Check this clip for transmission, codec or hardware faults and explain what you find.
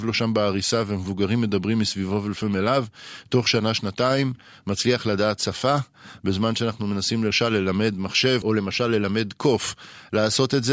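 Nothing in this speech recording points to a fault anywhere along its path. There is no event to place in time or explain, so there is nothing further to report.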